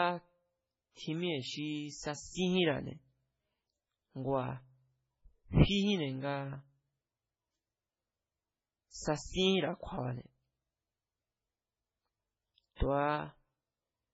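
Throughout, the speech sounds watery and swirly, likely from heavy MP3 compression. A spectrogram shows a hard ceiling at 7.7 kHz with flickering, patchy upper bands.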